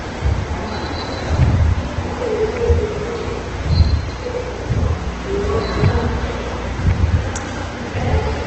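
Throughout, likely Opus compression at about 12 kbps makes the sound grainy and rough. A spectrogram shows noise-filled bands under a hard ceiling at 8.4 kHz.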